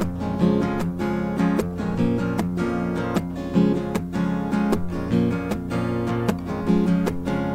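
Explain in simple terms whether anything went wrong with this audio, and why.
Nothing went wrong here.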